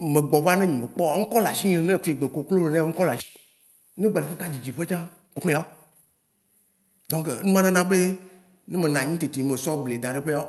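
At 3.19 s a skip ahead drops roughly a second and a half of speech. The waveform splices directly across the jump with no silent gap, so syllables collide abruptly. From 4.52 to 7.73 s a jitter buffer speed-up trims pitch periods repeatedly, running speech at about 127% with unchanged pitch and removing about a second. Spectrogram harmonics stay level while syllables compress.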